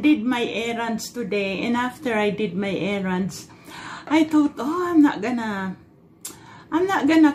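A corrupt frame was decoded at 1.96 s: a couple of damaged compressed frames were played anyway, leaving a brief, faint glitch of misplaced energy, peaking around -40 dBFS, in the audio.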